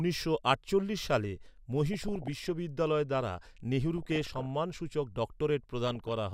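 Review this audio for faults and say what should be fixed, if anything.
DAB burbling at 1.93–2.49 s, 3.98–4.45 s and 5.87–6.12 s. Bit errors of around 0.7 to 1 percent corrupt sub-bands, giving short blips of noise. Improve reception with a better antenna or placement.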